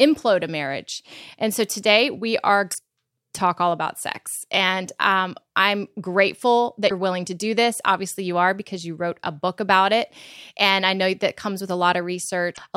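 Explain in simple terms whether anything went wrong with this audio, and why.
Three short stretches of the compressed speech stream were damaged, meaning some of the stored data was wrong or missing. When the decoder reaches those spots it can't read the data properly and has to hunt for the next clean starting point. Each one comes out as a brief chirp or blip cutting into the speech, at about 2.68 to 2.75 s, 6.86 to 6.92 s, and 12.50 to 12.59 s.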